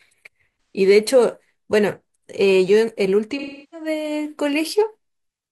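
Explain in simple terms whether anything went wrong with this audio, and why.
AAC frame loss with concealment happens twice, from 0.62 to 0.76 s and from 3.31 to 3.87 s. Small chunks of the compressed audio went missing, and the decoder covered each gap by reusing the last sound it received, scrambled. The first gap lasts about 130 ms, so it sounds like a brief smeared, noisy patch in the speech. The second runs about 340 ms, so the patched sound fades toward silence before the speech returns.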